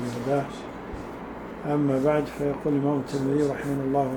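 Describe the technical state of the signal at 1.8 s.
At 1.8 s the signal is intact, with no dropout, distortion or other technical fault at that moment.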